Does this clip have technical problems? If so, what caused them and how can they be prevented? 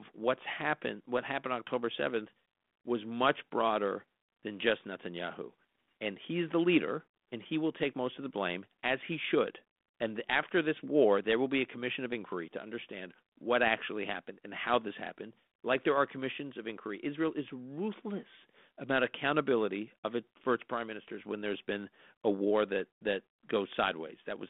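Yes. At 17.28 s a single sharp pop with a rough, gritty edge and a momentary change in level cuts into the speech on a band-limited telephone line whose light coding grain fits 32 kbit/s G.726. This is bit errors on an ADPCM link: a few corrupted bits at a very low error rate throw the decoder's step size and predictor off, so the damage briefly rings on. Better radio coverage or error protection on the link would prevent it.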